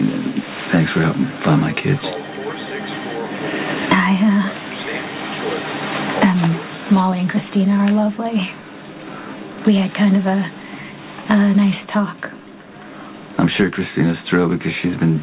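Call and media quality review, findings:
Nothing stood out on listening; the audio carries nothing above 4 kHz, which fits a narrowband call path such as G.711 mu-law at 64 kbps.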